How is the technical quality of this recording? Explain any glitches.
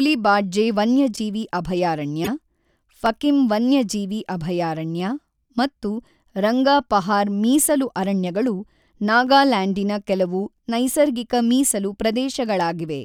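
The recording has four brief glitches, two noisy blips and two clicks.

At 1.14 to 1.18 s and 2.24 to 2.28 s there are short chirpy bursts of noise, peaking around -15 dBFS and about -10 dBFS. These are corrupt frames that were decoded anyway: damaged bits spread energy across wrong frequencies for roughly two frames each.

At 3.06 s and 5.00 s, just before "ಮತ್ತು ರಂಗಾಪಹಾರ್ ಮೀಸಲು ಅರಣ್ಯಗಳು", single sharp clicks sound. The likely cause is dropped samples, a fraction of a millisecond of signal missing, so the waveform jumps abruptly rather than losing any audible sound.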